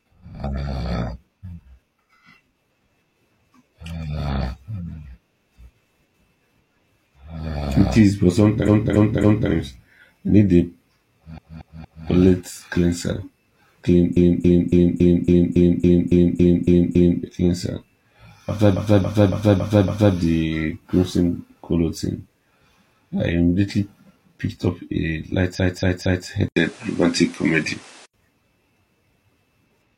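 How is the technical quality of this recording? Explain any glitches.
The recording has two kinds of fault: a series of stutters and, near the end, an abrupt change in input quality.

Repeated frames occur five times. Right after "is but", a 0.28 s block plays three extra times (8.64 to 9.48 s). A 0.23 s block does the same at 11.34 to 12.03 s, just before "palate cleanser". At 14.12 to 17.19 s a 0.28 s block repeats eleven times. The same length repeats five times at 18.72 to 20.11 s. A 0.23 s block repeats three times at 25.55 to 26.24 s. Chunks of compressed frames were delivered more than once, so the decoder replays them. The stuttering adds several seconds to the running time.

An input switched to a poorer device at 26.48 to 28.14 s. After an 80 ms gap, the sound turns duller, with nothing above 11.4 kHz. The level shifts by a few decibels, and a new noise floor sits roughly 30 dB below the signal. 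This pattern is likely a change to a different microphone or a headset profile mid-recording.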